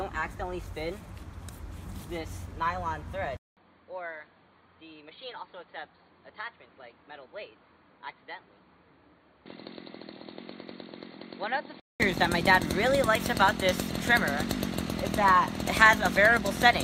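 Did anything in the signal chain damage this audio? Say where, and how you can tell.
Yes. From 3.37 s to 12.0 s the input likely switched to a poorer device at the driver level: after a 200 ms silence the sound drops about 10 dB, turns dull with nothing above 4.6 kHz, and gains a faint new noise floor. The waveform shows a gap and then a smaller envelope, and the spectrogram shows a hard ceiling at 4.6 kHz.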